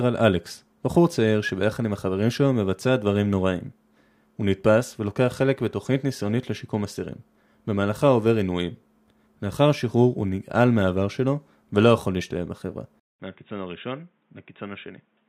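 A speech recording that changes character abruptly at 13.00 s: a silence of about 200 ms, after which the sound runs dull and boxy, roughly 10 dB quieter, with a new low hiss sitting far below it. This is likely an input switched to a poorer device. On a spectrogram, everything above 3.8 kHz disappears from that point to the end. The waveform shows a flat gap, then visibly smaller amplitude.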